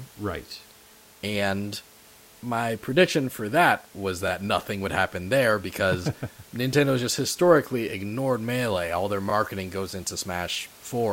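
Overlapping chunks at 9.30–9.32 s, just before "goes into": a 5-second chunk began early, replaying 23 ms of speech as a brief stutter over faint room noise.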